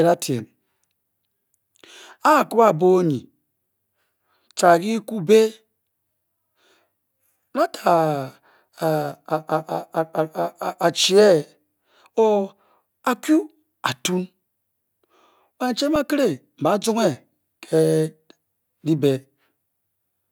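Speech, with one underrun with held sample at 15.96 s: the buffer ran dry, the waveform froze flat for 3.4 ms, and about 3 ms of audio was lost.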